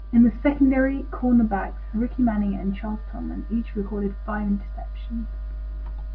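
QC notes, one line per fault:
Signal path intact across the whole recording, with continuous audio and no technical faults detected.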